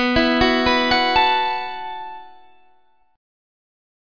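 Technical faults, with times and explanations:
Nothing technical goes wrong anywhere in this one, so there's no fault to point to.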